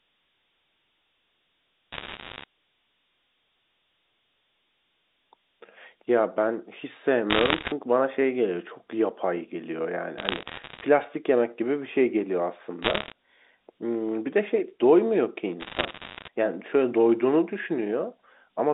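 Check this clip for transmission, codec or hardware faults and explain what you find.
Two faults are audible in the speech: a constant shaped hiss from low bit depth, and five short bursts of bit errors on a digital phone line. The telephone band itself, roughly 250 Hz to 3.7 kHz, comes through as expected.

Low bit depth with noise shaping runs for the whole clip. The signal is quantised coarsely, which fits about 9 bits, and the rounding error is pushed upward in frequency. The result is a thin hiss about 25 dB below the speech, strongest near the top of the band. Unlike the telephone coder's own quantisation noise, it stays steady in pauses instead of following the voice level.

Bit errors on a digital phone line occur at 1.92–2.44 s, 7.30–7.72 s, 10.18–10.84 s, 12.82–13.12 s and 15.60–16.28 s. Between about 0.7 and 2 percent of bits flip, and each flip corrupts a single sample, so the speech underneath continues unchanged beneath scattered sharp ticks and crackle. 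Unlike dropouts or clipping, nothing goes missing and peaks aren't flattened.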